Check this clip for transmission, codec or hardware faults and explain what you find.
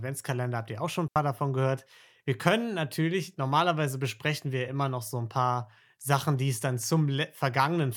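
One fault is present. From 1.08 to 1.16 s, after "ihr auch schon ein", there is a digital wireless dropout. The receiver lost too much data and muted for 80 ms. This leaves a clean hole of near silence with no noise burst.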